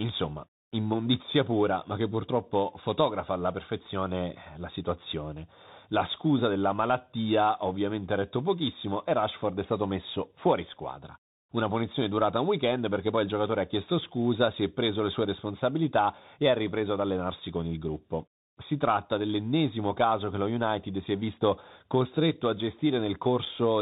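From start to finish the speech carries the damage of a Bluetooth CVSD headset codec, which fits a 64 kbps link. Nothing passes above 4 kHz, so a spectrogram shows a hard ceiling there. S sounds turn scratchy, loud bright peaks outrun the one-bit step and distort, and a granular hiss lies under the speech.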